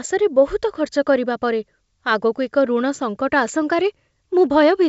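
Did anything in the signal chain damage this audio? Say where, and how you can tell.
No, the speech carries the band-limited character of G.722 wideband telephone coding, with nothing above about 7.7 kHz and at most a faint trace of the coder's own hiss, and no stage of the chain has left any audible damage.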